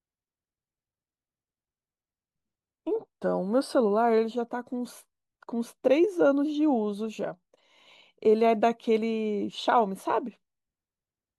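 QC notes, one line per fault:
No faults heard.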